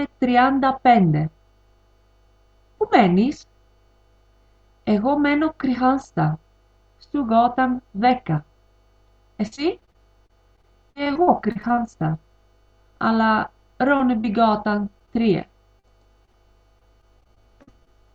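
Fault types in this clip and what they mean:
Repeated packet loss (robotic sound): audio kept dropping out, with each hole patched by stretching the last bit of sound. From 9.47 to 11.79 s there are 23 gaps, the longest 52 ms, and again from 15.79 to 17.89 s with 10 gaps. Both stretches come out choppy.
Jitter buffer slow-down: the receiver was short on buffered audio, so it repeated tiny slices of sound to rebuild its reserve. From 10.36 to 12.04 s that adds 57 ms and the audio plays at 97% speed, slightly dragged but at unchanged pitch, overlapping the robotic stretch.
Scattered short gaps: isolated losses spread out rather than bunched together, each filled in. Between 13.97 and 15.24 s there are about five of them, none longer than roughly 20 ms, so you get a few brief ticks and hiccups in otherwise continuous sound.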